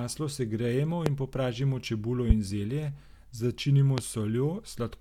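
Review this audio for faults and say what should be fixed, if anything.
Three loud pops cut sharply through the speech, each around 20 dB above it, with the speech continuing underneath. They occur at 1.06–1.10 s, just before "in popražimo čebulo"; at 2.30–2.34 s, just after "segrejemo in popražimo čebulo"; and at 3.98–4.01 s, just after "zelje začinimo". Each is likely a brief voltage spike, from a switch, connector, static discharge or driver glitch, entering the signal path. Securing cables, grounding equipment and updating drivers would prevent it.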